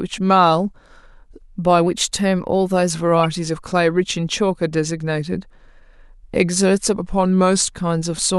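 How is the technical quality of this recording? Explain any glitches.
The speech has two short stretches where speed and pitch jump together, a drift correction step each time. From 1.87 to 2.91 s it runs about 6.4% fast and sits roughly a semitone sharp (107 cents), then snaps back. From 6.95 to 7.62 s it runs about 6.4% slow and drops about 114 cents flat. The likely cause is clock-matching software abruptly changing the playback rate to refill or drain its buffer, and then returning it to normal.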